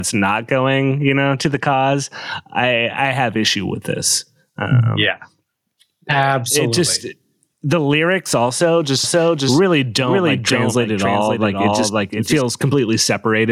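This speech recording suffers from gain pumping throughout: the input gain was likely set far too high, so a fast limiter or compressor keeps clamping down whenever the talker gets loud. The result is a level that breathes by around 10 dB, and loud and quiet passages are squeezed together into a flattened, crowded sound. From 9.04 s to 12.42 s, starting just after "just the lyrics also", a doubled audio track appears, likely because the same signal reached the mix a second time through a slower path or an edit left two out-of-step copies. A second full-band copy trails the original by about half a second, roughly 5 dB quieter, with no reverb tail or room colour, so it sounds like a clean echo that switches on and off abruptly at those two points.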